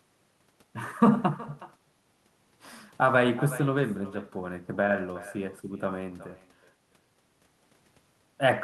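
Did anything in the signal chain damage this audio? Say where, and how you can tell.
Yes: echo with no canceller, present throughout the speech. At call processing, the far end's loudspeaker feeds its microphone unchecked, so every phrase returns roughly 0.4 s later as a thinner copy about 18 dB down, the round-trip delay of the network path.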